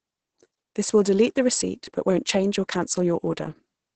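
Opus voice compression, running SILK at what sounds like about 10 kbps, cuts this speech off near 8.6 kHz and codes it coarsely, leaving it muffled, hoarse and slightly robotic throughout.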